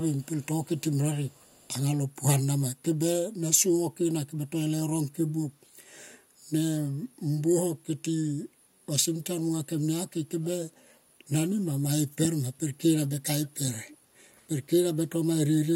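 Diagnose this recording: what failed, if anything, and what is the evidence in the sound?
Echo leak, in call processing, at 0.21–0.46, 0.65–0.82, 1.28–1.68, 10.43–10.48 and 13.87–13.97 s: a faint copy of the speech returns 343 ms late, about 35 dB below it, then about 25 dB below in the last two. Likely a far-end echo canceller failing to remove its loudspeaker's pickup.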